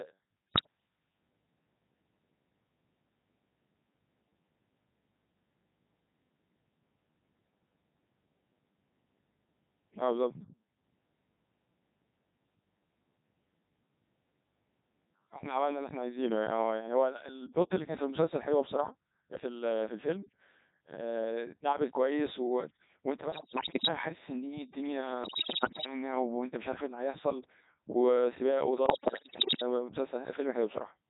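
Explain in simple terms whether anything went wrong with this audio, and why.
Codec 2 vocoder, throughout the whole clip: the speech has passed through a very low-rate digital radio voice codec. Instead of sending the actual sound wave, it sends only a rough description of each moment: pitch, loudness, whether the sound is voiced, and the broad tone colour. The receiver then rebuilds the voice from simple tones. The result here is heavily damaged, robotic and buzzy speech, because most of the original detail is never transmitted.

Bit errors on digital voice radio, at 0.51 to 0.67 s, 23.32 to 23.88 s, 25.24 to 25.86 s and 28.86 to 29.62 s: in these stretches some of the transmitted data arrived wrong, as happens near the edge of radio coverage. With so little data per moment, each wrong bit changes the pitch, loudness or tone of a whole slice of sound. The voice lurches in pitch and level and breaks into warbling, bleepy gibberish.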